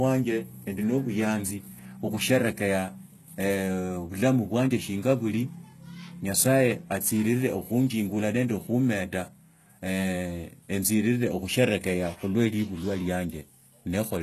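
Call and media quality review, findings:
Throughout: sibilants gritty and lispy, top band synthetic, nothing above 12.3 kHz. Likely HE-AAC compression at a very low bitrate, around 16 kbps, with treble rebuilt by band replication.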